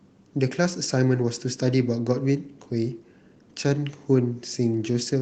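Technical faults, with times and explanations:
Nothing stood out on listening, with the speech coming across as expected for audio carried over a WebRTC call path.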